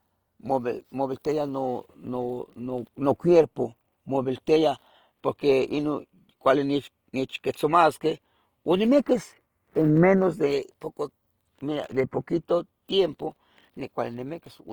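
Across the whole speech clip there's plainly audible Opus compression, likely at about 24 kbps in CELT mode: full bandwidth to 20.2 kHz, but grainy, rough, noise-filled texture.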